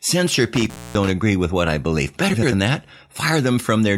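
A short speech clip with two kinds of technical fault. Between 0.55 and 1.10 s there is an intermittent contact. A loose plug or cable keeps breaking the circuit. The sound drops out, with crackle at each break. Faint hiss remains in the gaps. The open spells add up to about 250 ms. Frames out of order occur twice, at 0.74 to 0.77 s and at 2.33 to 2.53 s. In each case two adjacent runs of decoded audio play in swapped order. The pattern fits runs of four frames. The exchanged blocks are about 12 ms and 93 ms long. The first swap is a brief garbled flick inside the contact fault. The second is a longer garbled flutter. No time is lost in either.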